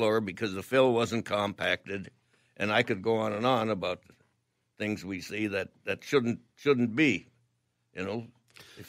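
Nothing in this speech recording stands out as a technical problem; there's simply nothing here that calls for a closer look.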